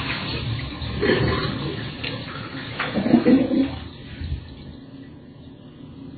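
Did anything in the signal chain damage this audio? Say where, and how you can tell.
Yes. The damage is at the codec stage, and it runs the whole clip. Nothing comes through above about 4.5 kHz, so the top end just stops at a hard shelf, and the heavy, watery swirl in what's left tells you the encoder was dropping weak frequency lines frame by frame. That's most likely MP3 compression starved of bits, and the damage is bad enough to point to something very low, in the region of 16 kbps.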